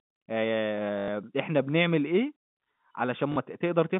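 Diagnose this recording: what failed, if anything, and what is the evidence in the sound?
Network stage: packet loss with last packet repeated. From 0.98 to 1.08 s the speech turns into a 100 ms robotic stutter, buzzing at 50 Hz, which fits 20 ms packets being replayed. A shorter 40 ms stutter occurs at 3.32 to 3.36 s.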